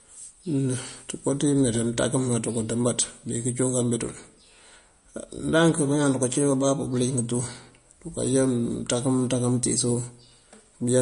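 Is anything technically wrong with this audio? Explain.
Yes. Throughout the speech, the audio was likely squeezed through MP3 compression at a low bitrate, which fits something near 40 kbps. With too few bits, the encoder drops all content above 10.6 kHz and discards weaker frequency lines that then flicker in and out from frame to frame. The result is plainly audible: sibilants sound dull and swirly, a watery, chirping texture clings to the speech, and sharp onsets lose their crispness.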